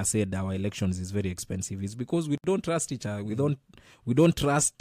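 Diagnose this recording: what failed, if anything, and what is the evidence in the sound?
Codec stage: a gap at a join of encoded pieces, 64 ms of silence from 2.38 to 2.44 s, where untrimmed encoder delay and end padding stayed in.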